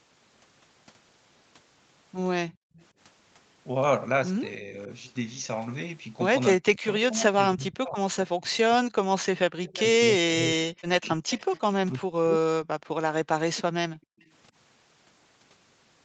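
Echo leak at 2.53 to 2.85 s: a very faint copy of the far-end speech returns about 280 ms late, likely because the loudspeaker side's echo canceller let part of what its microphone heard slip through and sent it back.

Background gated by the echo canceller, 2.57 to 2.73 s: while the loudspeaker played, the canceller clamped the microphone, so the room sound drops by about 40 dB for roughly 150 ms, then springs back when it releases.

Speech suppressed in double talk, 4.58 to 4.89 s: with both sides talking, the canceller likely mistook the local talker for echo and turned everything down. Here the dip is slight and brief, around a fifth of a second.

A longer bout of speech suppressed in double talk follows from 6.57 to 12.41 s. Over roughly 3 s of that span the talker's speech sinks deeply, in places nearly to silence, and cuts in and out in pieces.

Inside that stretch, echo leak returns at 9.64 to 9.83 s and 11.05 to 11.88 s, delayed about 328 ms. 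The first scrap is fairly clearly audible beneath the speech. The second is somewhat quieter and lasts nearly a second.

Background gated by the echo canceller again at 12.79 to 12.93 s: the room tone briefly drops by about 40 dB for roughly 150 ms before recovering.

Speech suppressed in double talk at 13.35 to 14.21 s: about 0.7 s of the talker is pushed down hard, likely the canceller again treating overlapping speech as echo, leaving the speech chopped and sunk almost out of hearing.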